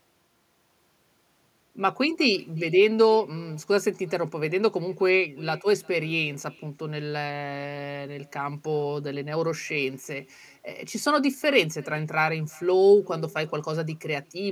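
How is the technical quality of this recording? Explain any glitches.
The recording carries one persistent fault: echo with no canceller, present throughout the speech. The far end is playing the call over a loudspeaker, its microphone recaptures that sound, and nothing subtracts it, so each phrase returns around 400 ms later. The echo sits about 27 dB below the direct speech, a faint, thin shadow trailing every utterance.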